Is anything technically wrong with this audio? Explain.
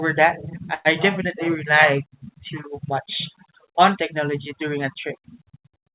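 Yes. At 0.74 s the speech stalls for about 0.13 s, until 0.87 s. This is a call audio freeze. The likely cause is packets delayed in transit, leaving the jitter buffer empty. The receiver fills roughly 108 ms by extending the last sound, heard as a brief fading buzz or hiss. When audio resumes, nothing is lost. The rest arrives about 108 ms later than before. The audio has the narrowband G.711 call sound, with nothing above 4 kHz.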